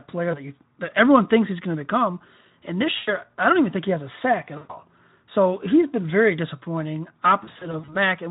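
VoIP packet loss concealed by the speech codec interrupts this speech clip at 0.31–0.39 s, 2.97–3.16 s, 4.57–4.76 s and 7.43–7.97 s. Audio went missing for about 20 ms, 100 ms and 120 ms in the first three, and for about 180 ms in short gaps of up to 40 ms across the final half-second. Each time, the decoder stretches its last pitch and spectral shape into a fading buzzy or noisy tone, and the voice stays weak briefly after the data returns. The light Speex coloring throughout fits a bitrate around 15 kbps.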